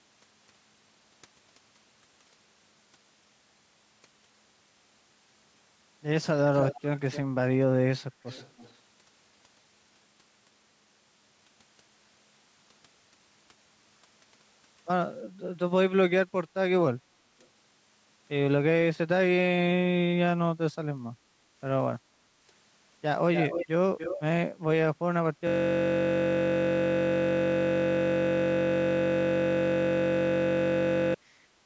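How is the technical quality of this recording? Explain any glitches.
Two faults are audible: recurring echo leak and a long system hang loop at the end. The speech also has no content above 8 kHz, consistent with call microphone processing.

Echo leak at 6.55–7.2 s, 8.26–8.76 s, 17.4–17.47 s, 23.34–23.67 s and 23.98–24.22 s: delayed copies of the speech return about 290–345 ms late. The far-end echo canceller likely let loudspeaker pickup through. The echo is strong, only a few dB down, at 6.55 s and 23.34 s, about 10 dB down at 23.98 s, and faint at 8.26 s and 17.4 s.

System hang loop from 25.47 s to 31.14 s: a 21.33 ms fragment repeats hundreds of times, which fits a 1024-sample buffer cycling during a freeze. It produces a steady 46.9 Hz buzz.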